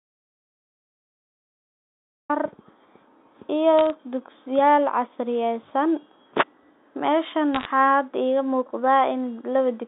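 Audio dropout to silence runs from the very start to 2.3 s: the clip opens on dead digital silence, with no room tone, until the speech arrives abruptly. The input was likely lost for that stretch, through a disconnected device, failed link or accidental mute, while the recorder kept writing silence. Whatever was spoken during those first seconds is not recoverable; the gap carries nothing at all.

Bit errors on a digital phone line appear twice, from 3.79 to 3.90 s and from 7.55 to 7.65 s. Individual bits in the 8-bit mu-law samples were flipped in transmission, so isolated samples jump to wrong values and produce brief ticks and a short burst of crackle over otherwise intact speech. The error rate is low in the first burst, a fraction of a percent, and somewhat denser in the second. The speech itself comes through the narrow telephone band of roughly 200 Hz to 3.7 kHz.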